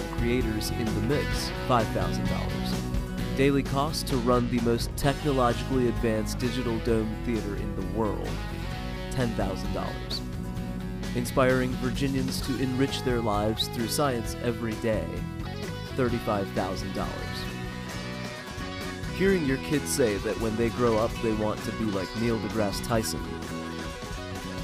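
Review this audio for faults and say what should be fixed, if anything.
Mains hum runs from 0 to 12.11 s: a steady 50 Hz tone with some low harmonics, sitting only roughly 10 dB below the programme. A ground loop or nearby transformer is feeding the power line into the signal path. Unlike rumble or handling noise, it holds one fixed pitch and never drifts, so a notch at 50 Hz and its multiples would address it. To prevent it, run all gear from one earthed outlet and route signal cables away from power supplies.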